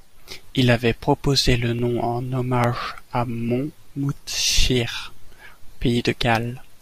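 Clock drift buffer slips run from 0.94 s to 6.04 s: seven clicks in the speech, spaced every 0.85 s. The steady spacing likely comes from two mismatched clocks, off by several hundred ppm, forcing a few dozen samples to drop or repeat at each slip.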